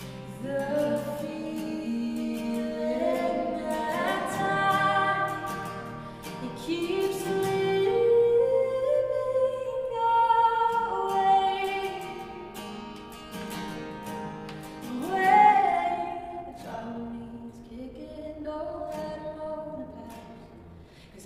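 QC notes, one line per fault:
15.52–21.26 s: time-stretched section. From 15.52 s to the end, the pace suddenly runs 1.41 times faster while pitch stays put. The sound turns rushed. Software likely squeezed this part to fit a length, dropping short slices to preserve pitch.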